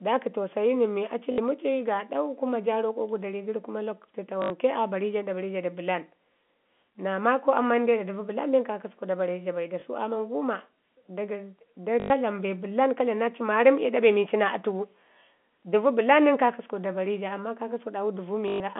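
Speech over a telephone line, band-limited to roughly 200 Hz to 3.4 kHz, with packet loss and the last packet repeated. Dropouts are patched by replaying the previous packet. Longer runs buzz near 50 Hz, which fits 20 ms packets. They occur at 1.32–1.38 s, at 4.42–4.50 s after "dari gəri kuma lakutu", at 9.80–9.82 s after "da bare ja bai", at 12.0–12.1 s, and at 18.48–18.60 s. They last 20 to 120 ms; the runs stutter robotically, and the single repeat at 9.80 s is a small blip.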